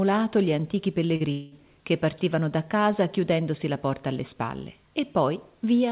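Short concealed packet loss at 1.16 to 1.23 s: about 40 ms of audio arrived too late, and the receiver extended the preceding sound across the gap, leaving a brief smear. Long network dropout at 1.32 to 1.55 s: roughly 200 ms is missing, most likely from a network stall, and nearly all of it is filled with a fading continuation of the last sound rather than silence, before the audio resumes. Both sit within the call path's narrowband sound, with nothing above 4 kHz.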